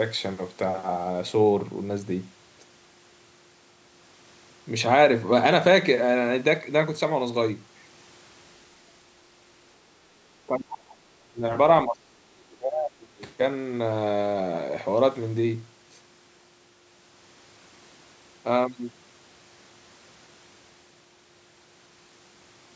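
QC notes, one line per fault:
10.47–11.44 s and 11.85–13.15 s, speech suppressed in double talk: the speech sinks by roughly 40 dB, then about 30 dB, for about 1 s and then about 1.5 s, likely because the echo canceller ducked the talker while the far side spoke. The spectrogram shows faded, near-blank patches, and the waveform envelope collapses.
13.18–13.22 s, other side's voice leaking through: a 40 ms scrap of a second voice, about 30 dB below the speech, just after the second dip. It is likely loudspeaker echo the canceller failed to remove. It shows as a faint smear on the spectrogram and barely a ripple on the waveform.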